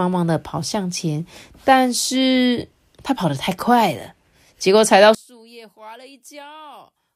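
One channel inverted, from 5.15 s to the end at 7.15 s: the speech abruptly falls by about 29 dB. The likely cause is one stereo channel flipping polarity, so the content common to both channels cancels when they are combined, leaving only a faint residue.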